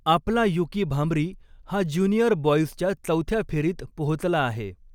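Nothing goes wrong anywhere in this stretch of speech, so there's no fault to point to at any moment.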